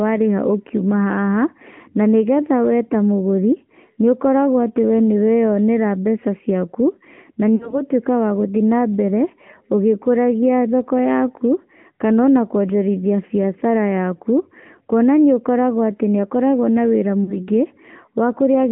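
Throughout, the speech carries the AMR narrowband mobile codec sound. Nothing passes below about 150 Hz or above 3.4 kHz, so a spectrogram shows a flat ceiling, and the plainly audible buzzy, synthetic texture fits a bitrate near 10.2 kbps. At 7.56 to 7.81 s and again at 17.24 to 17.37 s there are lost AMR speech frames. The decoder repeats its last pitch and vocal-tract settings, so the sound smears and fades before rough recovery. The waveform shows a decaying envelope, consistent with about 40 ms of lost frames.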